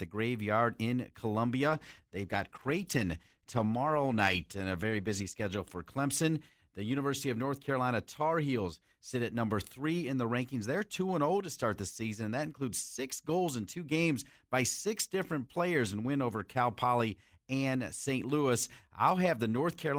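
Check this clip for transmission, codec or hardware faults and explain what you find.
One transmission fault is present: a call bitrate drop from 1.68 s to 6.99 s, just after "graveyard in". The encoder was forced to code the speech far more coarsely, consistent with a fall from 32 to 15 kbps. The speech turns rough and watery, worst for about 3.5 s, before recovering.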